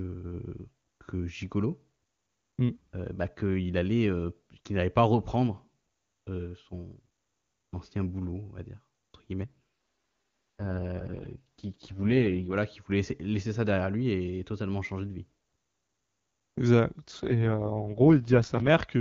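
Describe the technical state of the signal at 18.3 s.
An AMR rate drop runs from 17.00 to 18.69 s. The HD Voice coder falls from 23.85 to 6.6 kbit/s, keeping the band but making the speech rough and synthetic.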